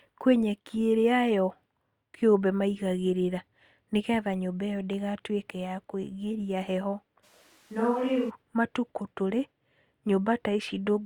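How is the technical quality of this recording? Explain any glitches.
The recording has one clear glitch, a brief switch to a distant microphone. From 7.25 to 8.29 s, right after "ya kũigĩria heho", the speech suddenly turns roomy and hollow, loses bass, drops by around 5 dB, and carries faint room noise well below the speech. This is likely the close microphone's signal dropping out so that a farther one takes over. A plain level dip or filtering would not add reverberant room sound, and here both the change and the return are abrupt.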